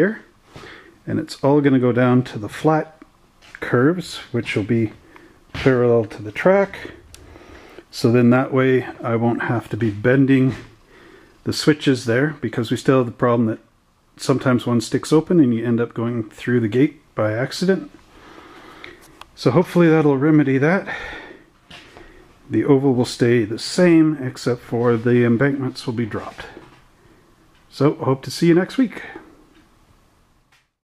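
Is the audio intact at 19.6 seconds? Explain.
Yes, the audio at 19.6 seconds is intact, with no fault present at that moment.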